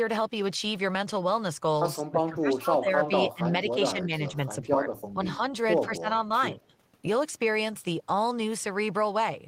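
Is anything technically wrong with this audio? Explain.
Yes. From 2.01 to 3.12 s, 3.34 to 3.43 s, 3.63 to 4.11 s, 4.28 to 4.91 s, 5.13 to 5.41 s, 5.86 to 6.08 s and 6.55 to 6.73 s, the speech dips sharply, by up to roughly 20 dB, or cuts out in pieces. This is likely speech suppressed in double talk: the echo canceller mistook the talker for loudspeaker echo while both sides spoke, and turned the talker down.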